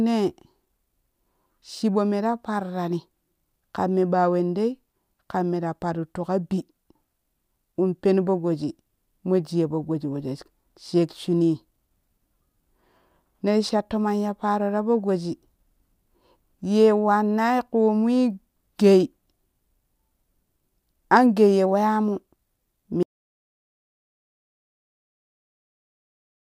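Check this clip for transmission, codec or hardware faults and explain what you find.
One fault stands out: an audio dropout to silence. At 23.03 s the speech cuts off abruptly mid-flow and the remaining 3.47 s, through to the end, are complete silence, with no room tone or background hiss underneath. That dead-flat gap is the signature of the input signal vanishing while recording carried on writing silence, most likely from a disconnected device, a failed link or an accidental mute. Anything spoken after that point is lost.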